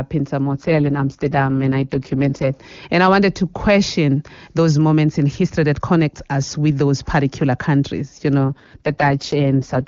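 From 0.46 to 2.53 s, and again from 8.4 s to the end, the link appears to force an AMR rate drop: the AMR wideband (HD Voice) codec, clear elsewhere at a high rate near 23.85 kbit/s, falls to its lowest mode, which the sound suggests is about 6.6 kbit/s. Bandwidth holds and nothing cuts out, but with so few bits for the speech model, the speech turns rough, raspy and synthetic until the higher rate returns.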